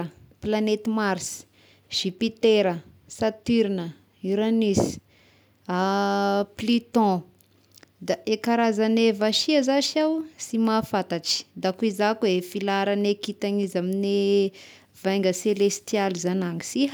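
Speech recording, no technical faults found.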